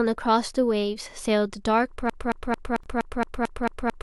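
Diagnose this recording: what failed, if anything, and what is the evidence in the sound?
A broken-record loop takes over from 2.10 s and runs to the end of the speech. A fragment of about 222 ms repeats back to back, nine times, with no change between passes. The stage is playback or streaming, with the player or stream having likely stalled while it kept resending the last piece it held. Everything that should have played after 2.10 s is missing. The loop simply fills the time.

A gap at a join of encoded pieces opens from 2.83 to 2.86 s, inside the looping stretch. It is a gap of about 24 ms whose edges are smeared by the codec, so the silent part is shorter. The sound then resumes exactly where it broke off. This is a codec-stage fault. Separately encoded pieces were joined without trimming, so the encoder's start-up delay and last-frame padding remain as a short hole in otherwise continuous sound.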